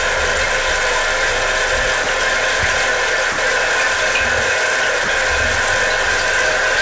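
Hard clipping runs through the whole clip of everyday sounds. The signal is driven about 10 dB past what the chain can pass, so roughly a tenth of the samples hit the ceiling and are cut flat. Every loud moment carries a harsh, fuzzy edge. On the waveform the peaks form squared-off plateaus. On a spectrogram, dense harmonic smearing climbs up to the band edge, which sits at 8 kHz here, consistent with a wideband G.722 call path.

Three brief gaps follow, at 2.04–2.06 s, 3.32–3.38 s and 5.04–5.08 s, lasting 20, 60 and 40 ms. In each, the sound gives way to steady noise or near silence and then returns. This is most likely sound dropped by the voice detector, with comfort noise filling in. The waveform shows short low-level stretches of flat noise. On a spectrogram each appears as a narrow vertical band of uniform, featureless noise.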